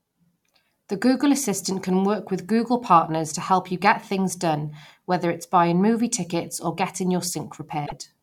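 Near the end of the speech, from 7.83 to 7.92 s, a short glitch of roughly a tenth of a second breaks in where the signal should continue cleanly. The cause is damaged data in a compressed stream: a stretch of the encoded bytes arrived wrong, so the decoder could not read those frames properly, lost its place and had to hunt for the next valid frame boundary before decoding normally again.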